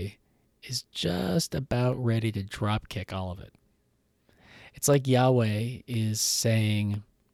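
From 0.93 to 6.94 s, periodic USB or driver dropouts silence about half a millisecond every 1.0 s. They are heard as regular ticks and show as thin vertical spectrogram lines.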